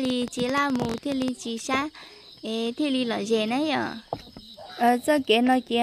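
From 0.05 to 1.29 s, a train of clicks runs over the sound. About twenty similar pulses arrive unevenly, near 13.8 per second. They peak about 10 dB above the audio and tick sharply. Interference or a faulty connection or power supply is the likely cause.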